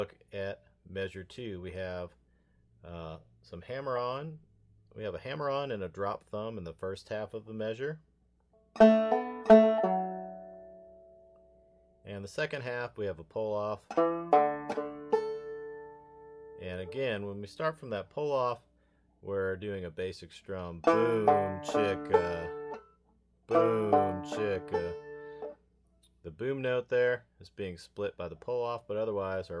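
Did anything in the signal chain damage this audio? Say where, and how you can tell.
No, nothing in the chain shows any audible damage.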